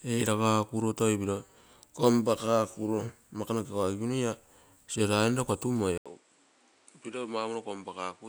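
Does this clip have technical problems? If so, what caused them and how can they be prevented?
Yes. At 5.98 s the speech cuts out for 80 ms. It then returns duller and a few decibels quieter, with a new background hiss some way below it. From there to the end, nothing is heard above 10.4 kHz. This sudden change of band, level and noise is most likely an input switched to a poorer device, a second microphone with a narrower range. Locking the recording input to one chosen microphone would prevent this.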